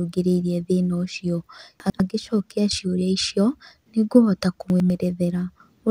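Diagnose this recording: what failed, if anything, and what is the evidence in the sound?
Twice in this speech the sound briefly jumbles, at 1.8 to 2.0 s and again at 4.7 to 4.9 s. A short stretch jumps ahead and then steps back. These are chunks out of order at the buffer or transport stage. A 100 ms block arrived or was written one slot late and played after its successor. Nothing is missing, but the swap leaves three hard joins each time.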